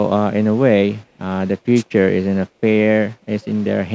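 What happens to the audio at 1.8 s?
At 1.75 to 1.83 s there is a wireless microphone noise hit. For about 80 ms a brief swish of static rises over the speech. The analogue FM radio link between microphone and receiver briefly faded as reflected signals cancelled the direct one. With the signal that weak, the receiver's own hiss comes up until the signal recovers. The call microphone processing limits the band to 8 kHz.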